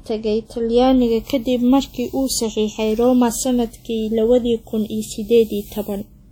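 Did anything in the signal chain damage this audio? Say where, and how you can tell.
Yes, at the codec stage, likely WMA compression, with a bitrate that sounds like about 48 kbps. Throughout the speech, long transform blocks smear quantisation noise across tens of milliseconds, so the sound rings and washes, hiss breathes with the signal, and content stops near 19.9 kHz.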